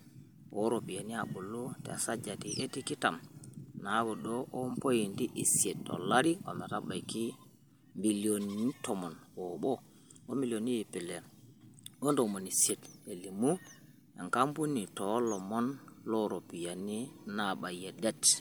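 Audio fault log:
No technical fault can be heard anywhere in this speech recording. There is nothing to log against any time.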